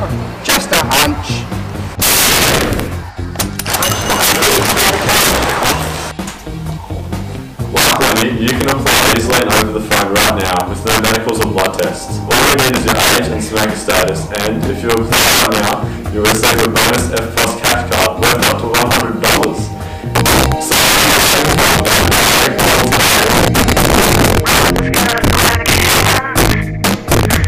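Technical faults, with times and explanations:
Throughout, integer overflow: the signal is driven about 15 dB past the integer limit, so on roughly one sample in fourteen the peaks wrap to the opposite sign instead of flattening. That full-range jump gives violent cracks on loud passages, far sharper than clipping's blunt distortion.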